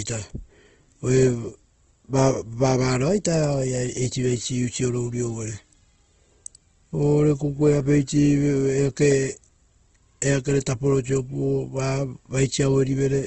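Throughout, the speech sounds rough and grainy, with nothing above 8.2 kHz, pointing to a bitrate near 16 kbps; likely Opus compression in music mode.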